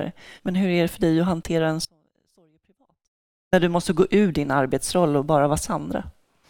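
At 1.85 s the speech cuts out abruptly, leaving only a faint leak about 40 dB down until 3.53 s. This audio dropout to a faint residue lasts about 1.7 s, likely a lost feed upstream with the later path still live. The waveform flattens, and the spectrogram blanks between sharp vertical edges.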